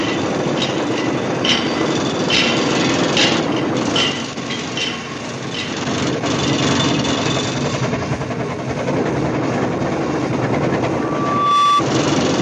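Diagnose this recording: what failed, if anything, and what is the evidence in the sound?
A 1.2 kHz tone swells from 10.89 s to about 5 dB above the sound until 11.84 s: loudspeaker feedback squeal, microphone-to-speaker loop gain exceeding one.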